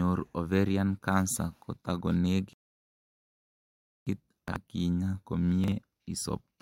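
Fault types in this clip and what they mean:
Rebuffering stall: The speech cuts to silence at 2.53 s and resumes at 4.07 s exactly where it stopped. This adds about 1.5 s with nothing missing. The player ran out of downloaded audio and waited for more to arrive.
Chunks out of order: Two brief garbled stumbles occur, at 4.48–4.56 s and 5.64–5.72 s. In each, a 40 ms chunk came one chunk late and played after the chunk that should follow it, scrambling the order and creating three hard joins.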